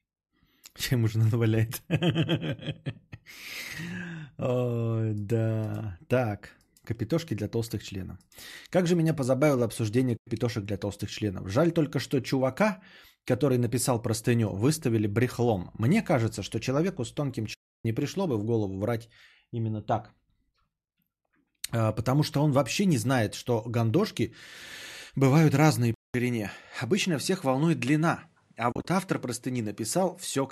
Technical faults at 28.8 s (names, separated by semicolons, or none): input switched to a poorer device; AAC frame loss with muting